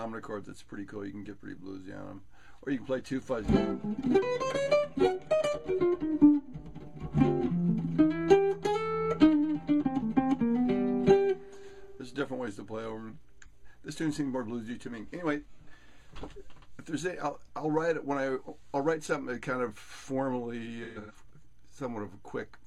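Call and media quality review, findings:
AAC frame loss with concealment, 13.42–13.51 s: a single lost frame (about 43 ms) rebuilt by the decoder from the previous good spectrum. Brief smeared, noisy patch in the audio.

AAC frame loss with concealment, 20.83–21.19 s: repeated losses totalling 256 ms over about 340 ms, longest gap roughly 150 ms. Concealment repeats the old spectrum, then fades it down. Audio goes phasey, dips, and fades back in.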